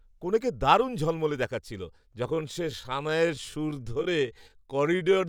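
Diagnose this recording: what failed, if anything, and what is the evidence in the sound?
A time-stretched section starts at 2.29 s and runs to the end of the speech: the pace drops abruptly to about 0.65 times its earlier rate while the pitch stays put, and the slowed part drags. The likely cause is a stretching step applied after capture, filling extra length by repeating short overlapping grains. On a spectrogram, harmonics keep their spacing but syllables widen and onsets blur. The waveform shows elongated envelopes with repeated patterns.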